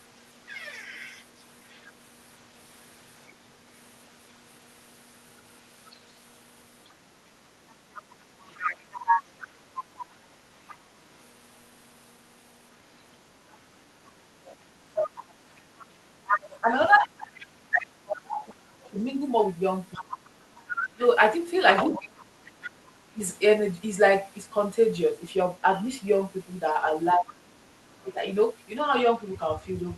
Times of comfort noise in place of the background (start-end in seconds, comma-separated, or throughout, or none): none